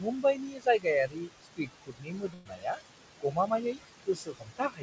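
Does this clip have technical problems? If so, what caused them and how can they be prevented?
Yes. Noise suppressor artifacts run through the whole clip. The suppressor pulls down every band it judges to be steady noise, by about 20 dB, and re-decides this frame by frame. The room noise, which sits only about 9 dB below the speech, dips away in the pauses and surges back under the voice. A gentler suppression setting, or a quieter room and closer microphone so less reduction is needed, would prevent this.

The same suppressor also cuts speech in four stretches: 0.0 to 0.86 s (down by about 17 dB at worst, roughly half a second affected), 1.07 to 2.79 s (about 21 dB, roughly a second), 3.20 to 3.79 s (about 19 dB, a fifth of a second), and 4.03 s to the end (about 21 dB). Because the noise is so close to the speech level, quiet consonants and word endings get classified as noise and are turned down with it, so they sound swallowed or faint. 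Lowering the suppression strength or raising the speech-to-noise ratio at the microphone would prevent this.

A burst of packet loss hits from 2.34 to 2.47 s. Roughly 120 ms of consecutive audio never reached the receiver in time. The decoder covered about 112 ms by stretching the last sound it had and fading it out, so the voice turns into a brief held buzz or fading hiss, then jumps ahead with that slice of speech gone. A more stable network path, or forward error correction and a larger jitter buffer, would prevent this.

The audio carries nothing above 8 kHz, consistent with the G.722 call codec on the path.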